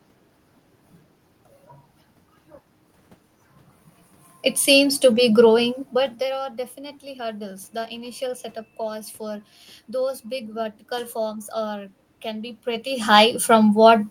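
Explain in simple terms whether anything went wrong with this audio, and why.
Nothing stood out as a problem when listening: the background noise of the room and the changes in how loud the talker sounds at around five and a half and twelve and a half seconds, as they shift relative to the microphone, are simply part of how this speech was recorded.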